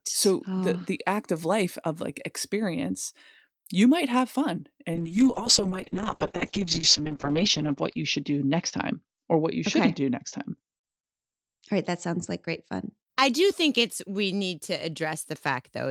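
From 4.95 s, just after "you might have fun", the speech shows a call bitrate drop lasting until 12.97 s, where "I do think it's" follows. The falling bandwidth estimate forces the encoder to code far more coarsely, and the top end is trimmed from 20 kHz to 8 kHz, so the voice turns muffled and rough. For about 2 s at the worst point the texture is watery, which fits a rate near 6 kbps, down from roughly 40 kbps.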